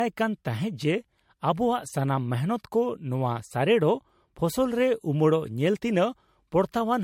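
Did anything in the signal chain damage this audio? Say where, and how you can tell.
Yes, at the codec stage, throughout the speech. It sounds swirly, smeared and hollow, with blurred attacks and nothing above 16.6 kHz. That is generation loss, likely from about four successive MP3 encodes near 64 kbit/s, each requantising on a shifted frame grid so errors accumulate.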